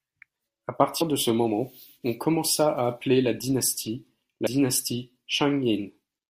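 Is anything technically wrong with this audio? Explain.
Yes. Compressed frames are skipped at 1.00 s and 4.46 s: whole 21.3 ms frames are dropped, jumping the speech ahead roughly 70 ms and 100 ms.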